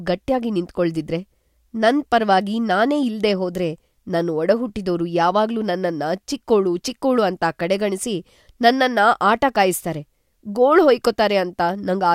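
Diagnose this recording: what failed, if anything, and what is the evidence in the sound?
Nothing failed; no fault is audible in this speech.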